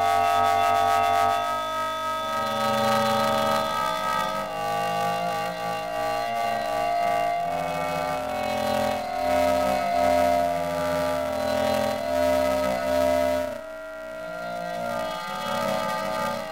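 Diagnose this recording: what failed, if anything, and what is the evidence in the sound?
The failure is at the sample-format stage: planar audio read as interleaved. A robotic buzz runs through the whole recording, with no clear octave shift. Each block holds one channel's samples followed by the other's, but the reader treats them as alternating pairs. Every block is replayed twice at double speed, once per channel. The blocks last 2.9 ms, which fits a 128-sample buffer. That chops the sound at about 345 Hz, producing the buzz.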